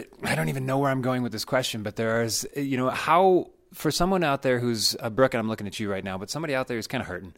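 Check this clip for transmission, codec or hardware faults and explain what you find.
Nothing wrong turned up on a listen through this speech, so there's nothing to report here.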